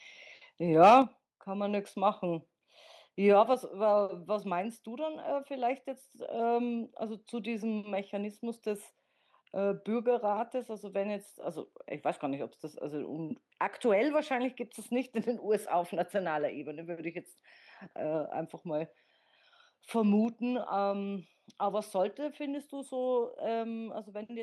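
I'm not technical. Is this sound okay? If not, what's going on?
No. From 0.82 to 0.98 s there is a harsh crackle on the loudest sound, most likely microphone overload: the peaks are flattened, not just loud. Then at 1.02, 3.54 and 20.25 s everything, background included, suddenly gets quieter in one step, likely the microphone volume stepped down automatically, rather than a gradual fade.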